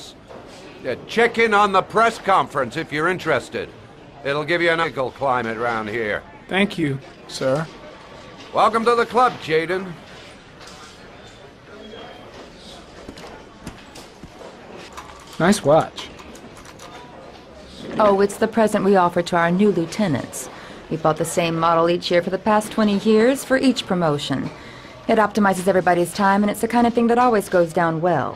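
At 4.83 to 4.85 s the playback makes a skip ahead. About a second of audio never plays, and the material on either side of the cut is butted together with no silence and no filler. The receiver discarded that stretch, likely because its buffer overflowed, and moved straight on to audio already waiting. It differs from a dropout because there is no hole or concealment noise. The sound simply lurches forward, and continuity breaks at the join.

From 6.56 to 8.34 s there is a jitter buffer speed-up. The buffer was holding more audio than its target, so the receiver trimmed many short pitch-period-length slices in quick succession and removed around 0.4 s in total. Playback runs at about 121% speed and sounds rushed. Unlike a resampling or clock-rate error, the pitch stays where it was. Only the timing compresses, and it returns to normal after 8.34 s.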